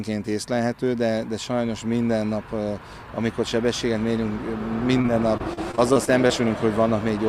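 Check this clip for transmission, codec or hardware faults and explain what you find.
One transmission fault: repeated packet loss (robotic sound) from 5.01 to 6.31 s. Packets kept going missing in ten short gaps, the longest 33 ms, and each was patched by stretching the preceding sound, about 17% of that stretch. The audio turns choppy, with pieces missing.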